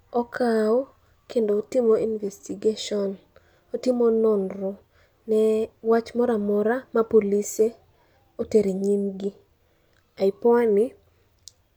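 No technical faults detected.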